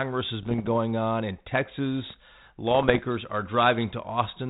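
Speech carried over an ADPCM link, band-limited below 4 kHz with the light graininess typical of G.726 at a rate that fits 32 kbit/s, shows bit errors on an ADPCM link in two bursts, from 0.42 to 0.69 s and from 2.71 to 3.00 s. Flipped bits, on the order of half a percent, knock the decoder's step size and predictor off track, so each error rings on for milliseconds as pops, rough crackle and brief jumps in level.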